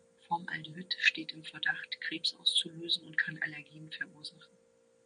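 No technical faults can be heard in this speech recording. A faint room noise sits in the background, about 47 dB below the speech, as part of the space where the microphone was.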